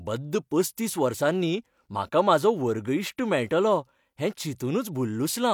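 No technical faults are audible.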